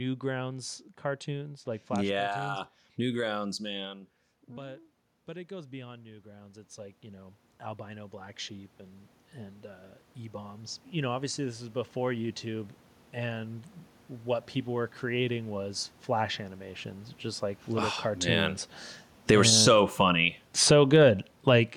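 At about 3.5 s the talker moves away and the level drops by about 13 dB. From 3.67 s to 17.54 s the automatic gain rising fault follows: the control slowly pushes its gain up by about 18 dB, so speech and room noise swell together until "little oh". On the waveform the envelope creeps upward, and the spectrogram's noise floor brightens along with the voice.

After the talker comes closer again around 18.0 s, the level overshoots. Just after "little oh", from 18.2 s to 21.64 s, automatic gain falling sets in as the control backs off by about 5 dB. Speech and background sink together, visible as a shrinking waveform envelope and a darkening noise floor.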